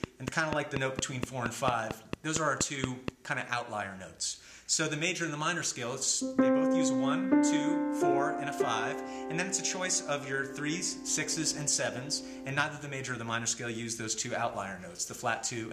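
Something likely injecting a regular pulse, such as interference from nearby equipment, produces a train of clicks from 0.04 to 3.09 s. About fifteen similar clicks arrive at 4.27 per second, some 20 dB above the sound, heard as steady ticking throughout that stretch.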